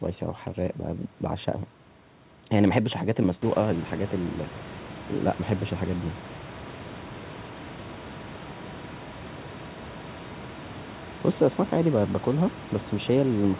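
No technical faults are audible in the speech: the room's background noise rises by about 14 dB from roughly three and a half seconds in and then sits about 18 dB below the speech as part of the recording itself, and the call path band-limits everything to 4 kHz, which fits a narrowband telephone codec such as G.711.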